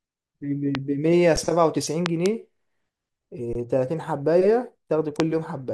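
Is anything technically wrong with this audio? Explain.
Yes. The speech has two kinds of fault.

Loud pops occur at 0.75 s, at 2.06 to 2.28 s as a pair, and at 5.2 s. They peak about 15 to 20 dB above the speech. A voltage pulse, likely from a switch, plug or static, lands on the signal. Each is a sharp thump while the speech continues underneath.

Underruns with a held sample occur at 1.36 s for about 9 ms and at 3.53 s for about 21 ms. The second fits a 1024-sample buffer. The output ran dry, and the converter froze on its last value. The sound flattens briefly. Roughly 10 ms and 20 ms of speech go missing.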